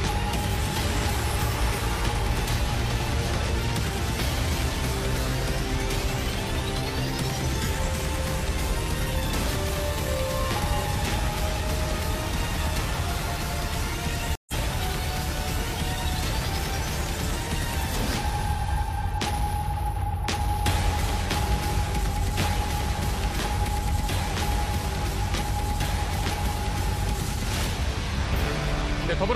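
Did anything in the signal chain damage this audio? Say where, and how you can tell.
Yes. At the network stage, a stream reconnect breaks the audio from 14.35 to 14.54 s. The connection dropped, leaving a gap of about 0.13 s of silence, and a fresh decoder then picked up the stream mid-flow, resuming roughly a tenth of a second further on, so a sliver of sound is simply missing. On a waveform this shows as a flat gap, with the audio fading back in where it returns. On a spectrogram it appears as a blank vertical band across all frequencies.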